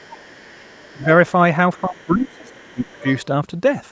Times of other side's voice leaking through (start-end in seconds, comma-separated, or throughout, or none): 0.00-1.04, 1.94-3.25